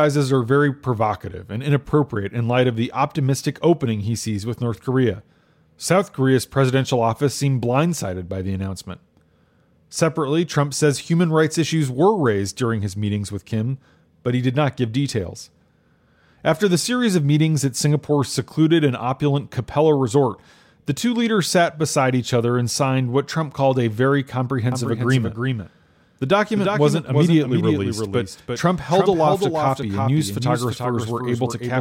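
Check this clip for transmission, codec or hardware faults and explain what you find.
One fault is present: a doubled audio track from 24.72 s to the end. The audio was likely captured a second time by a slower path, so a full-band copy trails roughly a third of a second behind, a few dB quieter. It starts abruptly, with no decay or room colour, giving a dry, stuttering echo.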